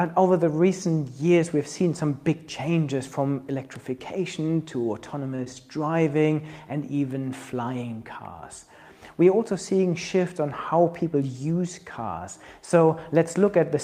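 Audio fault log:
5.35 to 5.40 s, short stall from a late packet: a packet was due but hadn't arrived, so the jitter buffer ran dry and the receiver held the last sound for about 31 ms until it came. Nothing is lost; the sound simply lingers, adding that much delay.
5.44 to 5.48 s, short concealed packet loss: about 20 ms of audio never reached the decoder. The receiver patched the gap by extending the preceding sound for about 13 ms and then blending back, leaving a brief smear.
10.73 to 11.24 s, jitter buffer speed-up: with more audio queued than the buffer's target, the receiver repeatedly removed small pitch-period slices, roughly 40 ms in total. Playback runs at about 106% speed without any pitch change, so this half-second sounds slightly rushed.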